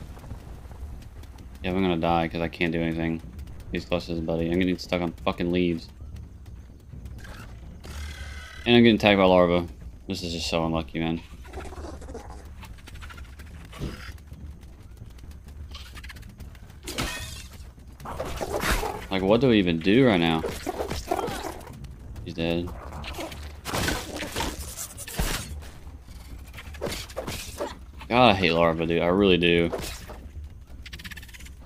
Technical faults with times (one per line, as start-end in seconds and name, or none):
11.10 dropped samples